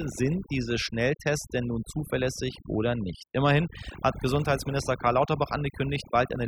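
From start to finish, the speech carries the marks of overdone noise removal. A noise reducer was pushed too hard. It cut individual frequency bands deeply whenever they sat close to its noise estimate. Quieter parts of the voice fell below that line and were removed too. The pauses drop and break up into twinkling, warbling specks.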